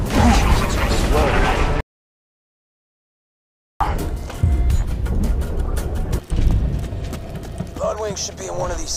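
The player most likely ran short of data or had its thread blocked, causing a playback stall from 1.8 to 3.8 s. The output drops to silence in mid-flow for a full 2 seconds before the sound carries on again.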